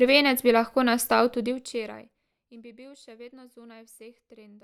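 No technical faults can be heard anywhere in the recording.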